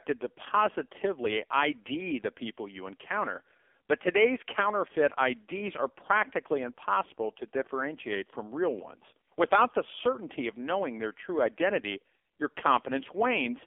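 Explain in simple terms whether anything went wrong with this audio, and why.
The speech went through an AMR narrowband mobile codec, the phone-call compression, for the whole clip. Nothing above about 3.5 kHz survives, so it sounds thin and muffled. The compression is heavy, making the voice buzzy and synthetic, like a poor mobile call.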